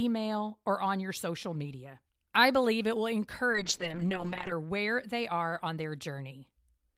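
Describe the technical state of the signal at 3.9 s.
At 3.9 s there is a call bitrate drop, from 3.53 to 4.59 s, after "I believe it will". Coding turns coarse and high frequencies are cut. It sounds watery and muffled. That fits an encoder squeezed from about 32 to 7 kbps.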